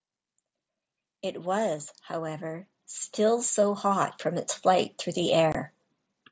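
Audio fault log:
1.46–5.67 s, automatic gain rising: the gain control judged the input too quiet and raised its level by about 12 dB, so voice and background swell together.
5.52–5.55 s, unconcealed Bluetooth headset packet loss: about 22.5 ms of headset audio never arrived and was not concealed, leaving an abrupt hole that fits three lost 7.5 ms frames.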